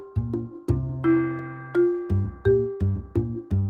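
No technical faults can be heard anywhere in the audio, and the signal holds steady throughout without any break, disturbance or change in level that would point to a problem in the chain.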